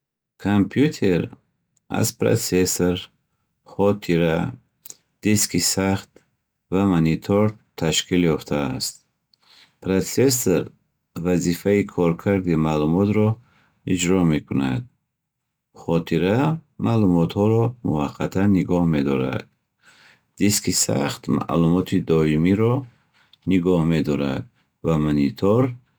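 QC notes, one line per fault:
Throughout: sample clock jitter. The converter's clock wanders by a few microseconds, so each sample lands slightly early or late at random and picks up the value the waveform had at that moment. The error scales with how steeply the waveform is changing, so a fine hiss and roughness rides on the speech. It swells on loud passages and bright sibilant sounds, sits around 30 dB below the signal, and disappears in the pauses.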